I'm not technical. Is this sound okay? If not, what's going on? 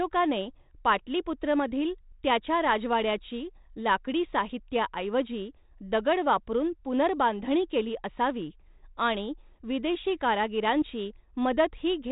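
Yes, nothing stood out as a problem when listening to this recording.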